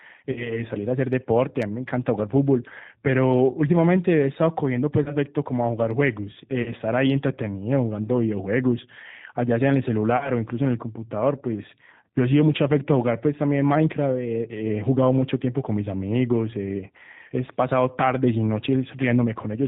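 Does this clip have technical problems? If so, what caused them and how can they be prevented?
Yes. The speech has passed through the G.729 codec at 8 kbit/s, which rebuilds each 10 ms frame from a vocal tract filter, a pitch predictor and a few pulses, making it plainly rough and synthetic. A spectrogram shows a hard ceiling at 4 kHz. A wideband codec such as G.722 or Opus prevents this.

VoIP packet loss concealed by the speech codec occurs at 0.32–0.64, 5.04–5.16, 6.62–6.73 and 10.17–10.31 s. Gaps of 40, 20, 40 and 40 ms, which fit one or two lost 20 ms packets, were filled by extrapolating the last pitch and filter. These bridged stretches sound buzzy or noisy and fading, with weak speech after each one. The waveform shows a shrinking periodic patch, and the spectrogram shows smeared, repeated harmonics. Jitter buffering and forward error correction or redundancy prevent this.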